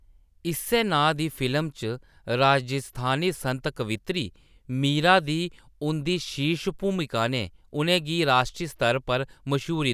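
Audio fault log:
No faults found in the speech recording.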